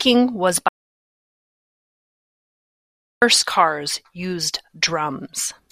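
From 0.68 to 3.22 s an audio dropout to silence removes about 2.5 s of speech, leaving silence without room tone until "cars used", likely a lost input link.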